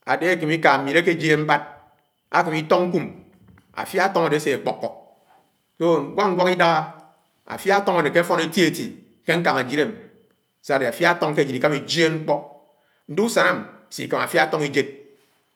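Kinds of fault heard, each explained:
Nothing in this speech recording stands out as a technical problem; it's all heard without a glitch worth flagging.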